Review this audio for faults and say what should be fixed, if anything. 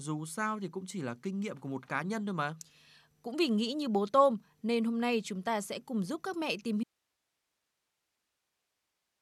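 An audio dropout to a faint residue begins at 6.84 s, right after "giúp các mẹ tìm", and lasts to the end. The speech cuts off abruptly, leaving only hiss roughly 50 dB below it. The likely cause is a lost source feed while later stages stayed live. Monitoring the input feed during recording would catch the break while it could still be redone.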